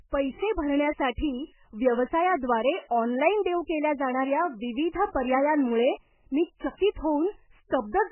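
From start to finish the speech sounds watery and swirly, with a dull, muffled top where nothing survives above 3 kHz, heavy smearing of consonant attacks, and metallic chirps on s sounds. This is likely MP3 compression starved of bits, which fits a very low bitrate of about 8 kbps. The encoder has cut the treble at a fixed point and zeroed weak frequency lines, and those lines flicker on and off from frame to frame.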